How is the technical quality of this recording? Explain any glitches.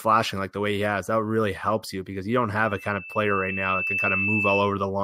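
The recording has one real problem: a loudspeaker feedback squeal takes over the back half of the speech.

From 2.64 s to 4.77 s, a single tone at 2.6 kHz creeps in and swells over about a second and a half until it sits a few dB louder than the speech itself. The mic is picking up a speaker it's feeding, and at 2.6 kHz the loop gain tops one, so that frequency keeps feeding itself and builds into a piercing whistle.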